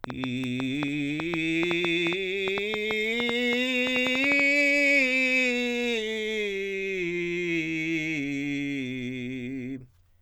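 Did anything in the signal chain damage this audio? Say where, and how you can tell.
Yes. From 0.04 s to 4.41 s the music carries a train of clicks, around thirty sharp, similar pops at about 5.7 per second with uneven spacing, peaking about 15 dB above the music. The stage is likely the analogue wiring or interface, with nearby equipment coupling impulsive interference into the line. On a spectrogram each click is a thin broadband vertical stripe; the waveform shows narrow spikes jutting well above the music's envelope.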